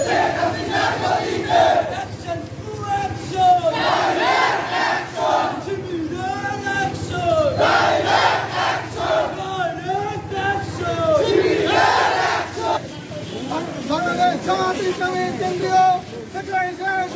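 No technical faults are audible.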